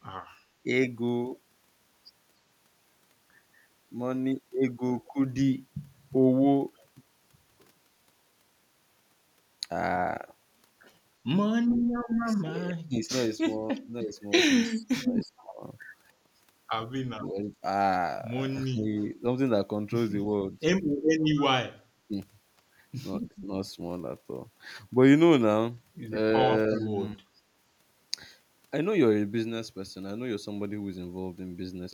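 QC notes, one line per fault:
12.12–27.24 s, speech suppressed in double talk: the voice dips, thins or drops out in pieces across three stretches. From 12.12 to 19.04 s about 3 s of it is pulled down, by about 25 dB at worst. From 21.42 to 23.78 s about 0.7 s is cut, by up to about 35 dB. From 26.48 to 27.24 s about 0.3 s is cut, by about 25 dB. The likely cause is an echo canceller that couldn't tell this talker from loudspeaker echo while both sides spoke, and so attenuated everything.
12.14–26.81 s, echo leak: a faint, delayed copy of the speech trails it by 306 ms in four scraps, at 12.14–12.34, 14.64–15.43, 21.36–21.42 and 26.76–26.81 s. Its level sits at about 30, 20, 15 and 25 dB below the speech respectively, so the 21.36 s scrap sits highest relative to the speech. This is likely residual echo that a loudspeaker-side canceller failed to remove and sent back down the line.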